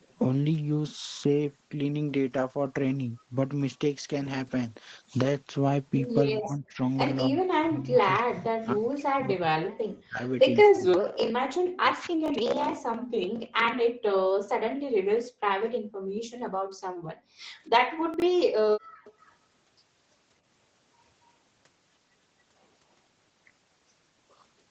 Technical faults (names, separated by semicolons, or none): speech suppressed in double talk; echo leak; chunks out of order; background gated by the echo canceller